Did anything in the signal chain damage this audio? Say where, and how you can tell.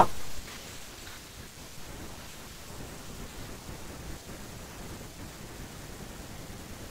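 No, nothing in the signal chain left audible damage on this speech recording, and there is no stage where the signal can be heard breaking down or changing character.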